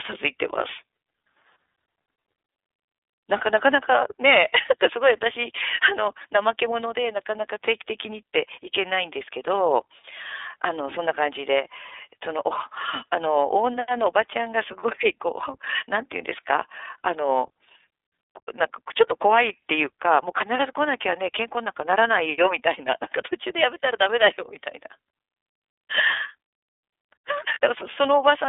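iLBC codec coding runs through the whole speech clip. It is a narrowband coder that builds each frame's excitation independently, so everything above about 3.6 kHz and below 300 Hz is missing, and the voice has a plainly rough, synthetic edge consistent with iLBC's 30 ms frame mode.

Lost iLBC frames occur at 27.54 to 27.58 s, where one 30 ms frame fails to arrive. The decoder fills the gap by repeating the last pitch cycle blended with noise, giving a brief held, buzzy vowel. Because the following frame decodes on its own, the voice recovers immediately.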